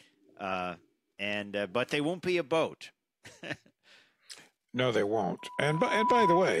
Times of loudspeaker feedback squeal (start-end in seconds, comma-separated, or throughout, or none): 5.39-6.60